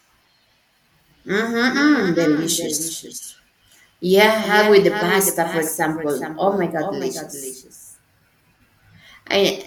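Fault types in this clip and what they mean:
Doubled audio track: a copy of the speech, about 10 dB quieter, trails roughly 400 ms behind throughout. It likely comes from a slower second path.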